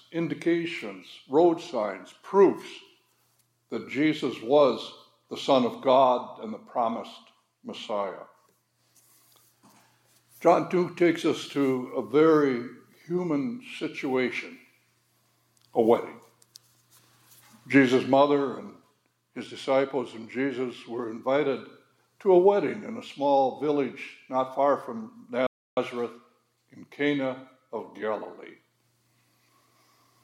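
At 25.47 s the sound cuts out abruptly in mid-flow and the output stays completely silent until 25.77 s, a gap of about 0.30 s, before playback picks up again. This is a playback stall. The hard, clean dropout with no fade or distortion points to the player being starved of data or having its output thread briefly blocked, so it likely had nothing to hand the audio device for that stretch until it recovered.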